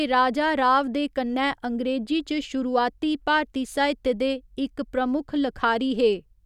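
Speech clip, no audible faults.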